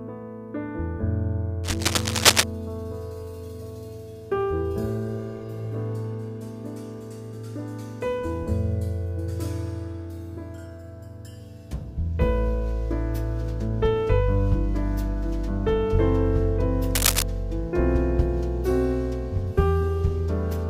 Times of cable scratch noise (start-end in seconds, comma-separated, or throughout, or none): 1.64-2.44, 16.91-17.23